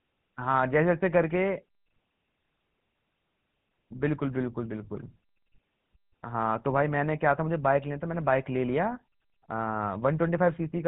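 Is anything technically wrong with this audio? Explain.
Yes. Throughout, the speech has been through the GSM full-rate codec: a vocal-tract model driven by sparse, regularly spaced pulses, which fits roughly 13 kbps, cutting everything above 4 kHz and leaving a plainly buzzy, gravelly roughness.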